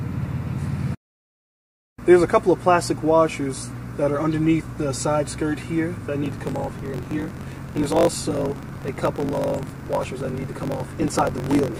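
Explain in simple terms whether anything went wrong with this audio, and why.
A block size mismatch (truncated) starts at 6.22 s and lasts to the end. One stage passes on longer chunks of audio than the next accepts, so each chunk's tail is dropped. That causes a 46.9 Hz buzz, which fits 1024-sample reads, and the sound runs 1.12 times fast at roughly normal pitch.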